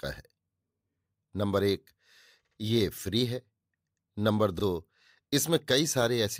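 At 2.45 to 2.58 s, repeated frames: a 64 ms block, consistent with two 32 ms frames, plays twice more, adding 128 ms and producing a stutter. At 4.59 to 4.62 s, a single 32 ms block repeats once, a shorter stutter.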